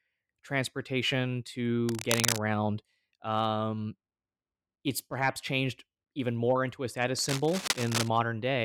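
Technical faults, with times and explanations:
1.89–2.41 s and 7.18–8.09 s: cable scratch noise, dense, uneven rustling bursts at roughly speech level, then about 5 dB quieter, likely from contact resistance changing in a worn, moving connector.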